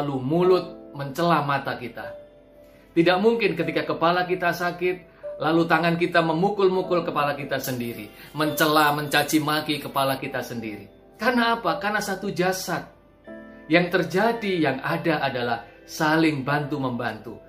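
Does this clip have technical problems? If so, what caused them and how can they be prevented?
Yes. From 7.64 to 10.18 s, pre-emphasis was left on: a 75 µs FM treble boost lacked its matching de-emphasis, lifting 10 kHz about 14 dB, so the sound turns thin, bright and sibilant. Prevent it by applying the matching 75 µs de-emphasis wherever pre-emphasised audio is received or decoded.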